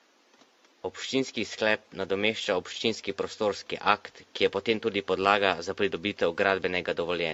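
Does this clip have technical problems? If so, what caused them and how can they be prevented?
Yes. Generation loss is present throughout the speech, giving a swirly, smeared, hollow sound with blurred attacks. Its likely cause is repeated AAC-LC encoding at 64 kbit/s, around seven passes, each quantising on a shifted frame grid so the noise and spectral holes accumulate. Prevent it by keeping a lossless master and encoding to a lossy format only once, at the final step.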